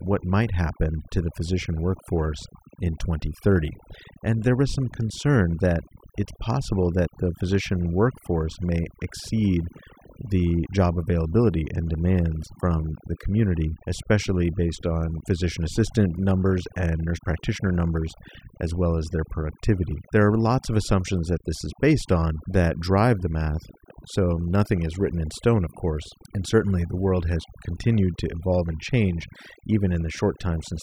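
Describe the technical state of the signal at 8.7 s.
At 8.7 s the speech carries overdone noise removal, and it is present across the whole clip rather than starting or stopping near this point. The noise reducer was driven too hard, so frequency bands whose level sits close to its noise estimate are pulled down or gated off entirely, taking low-level parts of the speech along with the noise. Between phrases the background collapses to near silence dotted with twinkling specks.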